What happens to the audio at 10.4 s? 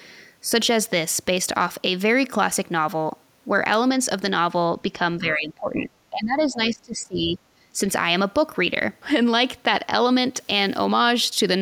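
From 10.35 to 10.85 s the speech picks up a fizzing crackle caused by an unreliable data bit. One line of the digital sample word is marginal, so its bit flips in a random share of samples, and each flip adds a spike of identical size. Unlike clipping distortion, which tracks loud peaks, this crackle is independent of level: the spikes stay uniform and continue through pauses, sounding like steady static laid over the signal.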